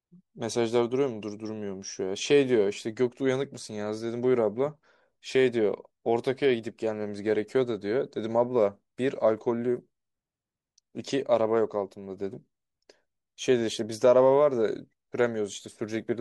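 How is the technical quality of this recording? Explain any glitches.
No glitches or technical faults turn up anywhere in the recording.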